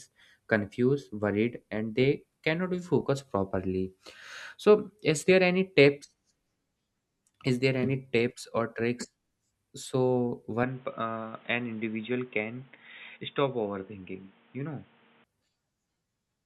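Input switched to a poorer device, 10.63 to 15.24 s: the speech abruptly dulls, cut off above 3.8 kHz, quieter, with faint new noise, likely from another microphone.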